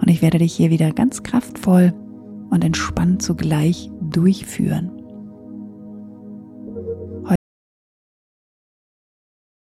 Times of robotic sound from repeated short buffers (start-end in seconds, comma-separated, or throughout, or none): none